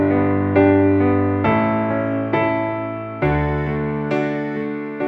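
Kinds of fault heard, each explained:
No technical fault can be heard anywhere in this audio. The sound holds steady throughout, with nothing breaking into it.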